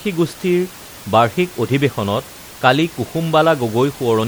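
Throughout the speech, the audio has likely passed through MP3 compression at a low bitrate, around 64 kbps. Short of bits, the encoder drops weaker frequency lines, which flicker on and off from frame to frame. The damage is plainly audible: a watery, swirling texture, metallic chirps on s sounds, and smeared onsets. The room noise sits beneath it, about 22 dB below the speech.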